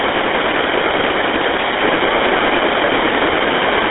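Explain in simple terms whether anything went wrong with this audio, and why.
GSM full-rate codec damage runs through the whole clip, from start to finish. This old mobile-phone codec rebuilds speech from a simple model of the throat and mouth, driven by a sparse train of pulses instead of the real signal. That shortcut gives the speech its plainly audible buzzy, gravelly roughness. The sound is also squeezed into a phone-line band of roughly 300 Hz to 3.6 kHz, with nothing above 3.8 kHz, so it sounds thin and muffled.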